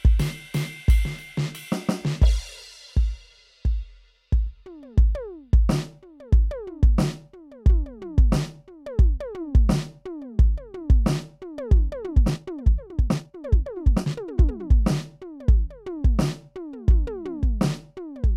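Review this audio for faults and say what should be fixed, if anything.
Software likely squeezed the music from 12.00 to 14.72 s to 1.61 times speed while holding pitch, a time-stretched section that sounds rushed. To prevent it, fit the music to length with edits or arrangement changes rather than automatic stretching.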